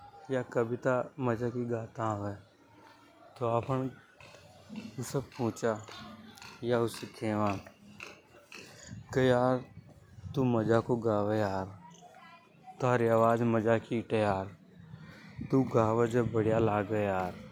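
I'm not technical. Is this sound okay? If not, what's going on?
No. CD scratch ticks, from 6.09 to 6.96 s: five brief clicks as a disc scratch repeatedly corrupts data the player can't repair, so it patches over tiny gaps.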